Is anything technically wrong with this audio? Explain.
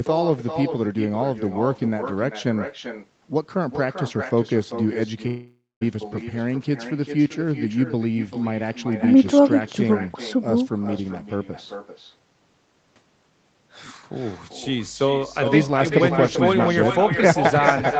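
Yes, there are three faults in this speech.

Throughout, there is echo with no canceller: the far end's loudspeaker feeds its microphone, so each phrase returns around 0.4 s later, about 7 dB quieter and thin. The delay and the thinness distinguish it from ordinary room reverberation.

From 5.27 to 5.83 s, a long network dropout is the likely cause. The sound is replaced by a fading buzz or hiss, then about 0.21 s of silence, and resumes with material missing, unlike a brief click or glitch.

From 14.64 s to the end, mains hum from power-line coupling adds a steady 50 Hz tone roughly 10 dB below the signal. It is constant and pitched, not broadband hiss.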